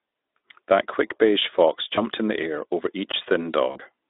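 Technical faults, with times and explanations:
1.95–2.01 s and 3.71–3.78 s, VoIP packet loss concealed by the speech codec: about 20 ms, then 40 ms, of audio went missing, the first just after "quick beige fox". The decoder extended its last pitch and filter while fading, so the sound turns buzzy or noisy and weak, with the smear lingering past the lost span rather than stopping cleanly.
3.12 s, block of digital silence: a hole of about 17 ms, just after "in the air over", where the output dropped to silence. Unlike concealment, nothing is extrapolated or faded. The sound switches off and on abruptly around the brief gap.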